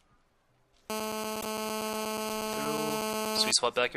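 From 0.90 to 3.51 s a GSM phone buzz sits about 2 dB below the audio. It is a steady raspy 217 Hz tone with many harmonics, which a spectrogram shows as evenly spaced horizontal lines. At 1.40–1.44 s the audio jumps ahead and shows a brief disturbance, seen as a short irregular patch. The likely cause is a broken MP3 bit reservoir after frames of about 26 ms were dropped.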